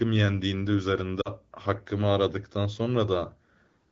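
A speech clip with lost AMR speech frames at 1.22 to 1.29 s: the decoder briefly smears and dips the voice before it recovers, a gap that fits two dropped 20 ms frames. The AMR wideband (HD Voice) coding around it is clear, with only light colouring.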